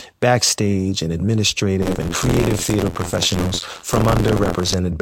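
From 1.81 s to 4.75 s the speech takes on a steady robotic buzz at about 86 Hz, which is buffer tearing. The writer and reader of the playback ring buffer have drifted so that they cross within each period, leaving roughly a fifth of every buffer filled with audio around 50 ms stale, hard-joined on both edges. The 86 Hz rate fits a 512-sample buffer. Unlike a one-off dropout or click train, it persists evenly and follows the signal.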